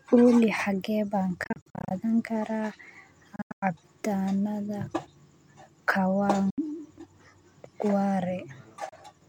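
Speech drops abruptly to silence in broken clusters at 1.44–1.91 s, at 3.36–3.63 s (including one gap of about 0.1 s), at 6.50–6.58 s and at 8.89–8.93 s. This is likely a Bluetooth dropout from late packets. Unlike a buffer stall, the sound resumes further along, as if it had kept playing.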